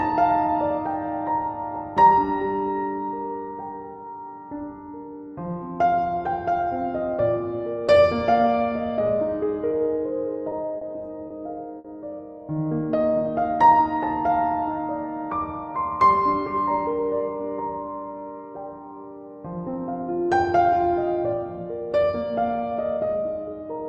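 At 10.49 s the first short stall from a late packet appears: a packet missed its slot, the jitter buffer emptied, and the receiver held the last sound for 20 ms before resuming where it left off. Three more follow at 10.77 s (40 ms), 11.27 s (30 ms) and 11.78 s (60 ms). Nothing is lost; each is heard as a brief held or buzzy sustain, and playback ends up 150 ms later.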